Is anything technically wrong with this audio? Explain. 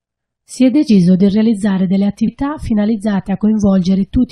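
Yes. Compressed frames are skipped twice, at 0.88 s and 2.27 s. At each point the decoder drops whole frames of the compressed stream, so the audio jumps ahead by roughly a tenth of a second. That fits a loss of around four frames of 21.3 ms each. On a waveform the envelope jumps abruptly. A spectrogram shows a brief vertical smudge where the patterns fail to continue.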